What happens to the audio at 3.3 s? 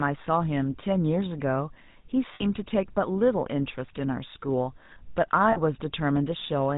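At 3.3 s the speech carries GSM full-rate codec damage. It isn't confined to that moment; it runs through the whole clip. The codec models the vocal tract and excites it with a regular pulse train, keeping only every third excitation sample. Nothing above 4 kHz survives. The result is a plainly audible buzzy, gravelly roughness, and the voice loses its brightness. That level of damage fits the 13 kbps full-rate mode.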